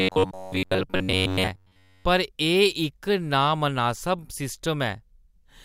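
Robotic sound from repeated short buffers runs from 0.01 s to 2.05 s, ending just before "पर एह् इक नामनासब". Across that stretch the speech becomes a stiff, metallic buzz at about 94 Hz that still loosely tracks the syllables. The likely cause is audio arriving too slowly, so that roughly 11 ms snippets get replayed to fill the gaps while fresh material is dropped. With most of the sound made of these loops, their fixed repeat rate sets the buzz.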